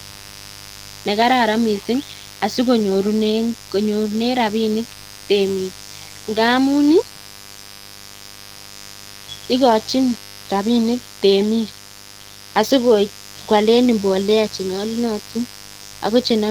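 From start to finish, a grounding or shielding fault, or switching from a dimmer or rectifier, lets spikes from the 50 Hz supply into the signal path. The result is mains buzz: a steady, raspy drone built on 50 Hz with harmonics climbing well into the kilohertz range. It sits roughly 20 dB below the speech.

Across the whole clip the speech also carries plainly audible codec damage, most likely from Opus compression squeezed to a low rate in the region of 16 kbps. At that rate the encoder works in its hybrid speech mode, leaving too few bits for detail. The speech comes out muffled and hoarse, with a rough, grainy surface rather than swirling, even though the audio still reaches across the full band.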